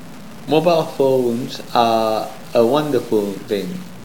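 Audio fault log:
Throughout: low bit depth without dither. The speech carries a grainy, rasping distortion that rises and falls with the sound itself, roughest in soft passages, where quiet tails crackle or break up rather than fading smoothly. The cause is likely coarse quantization, fitting roughly 6-bit samples truncated with no dither, leaving an error only about 25 dB below the signal. Because that error tracks the waveform instead of forming a steady hiss, it is heard as distortion, not noise.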